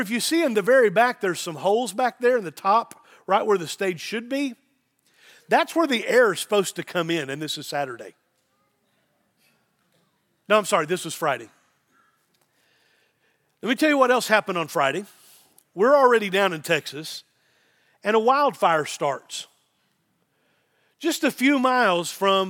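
No technical faults are audible.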